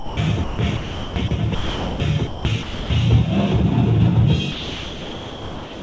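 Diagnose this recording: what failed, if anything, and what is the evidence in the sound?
Call processing failed. The sound gives way to steady comfort noise at 0 to 0.17, 0.44 to 0.59, 0.77 to 1.16, 1.28 to 1.31, 1.55 to 2.0, 2.27 to 2.45, 2.63 to 2.9, and 4.52 s to the end. The likely cause is sound dropped by the voice detector. It judged the audio to be background and stopped sending. The receiver then filled each gap with noise.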